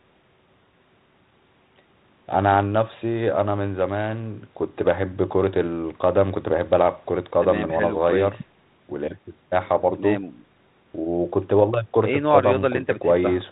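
Speech over a 32 kbit/s G.726 ADPCM channel, with only the light coding texture that path leaves and no technical faults to report.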